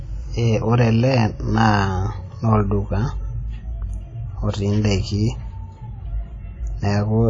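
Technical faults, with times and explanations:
Throughout, WMA compression: The speech has plainly audible codec damage. Nothing is present above 10.1 kHz, so the top end sounds dull and cut off. Consonants and vowel edges ring and smear. A hiss rises and falls with the level of the speech. This is likely a WMA encode at a low rate. The band limit and the damage fit a bitrate around 32 kbps. At that rate, quieter spectral detail is discarded and coding noise spreads over tens of milliseconds around each sound.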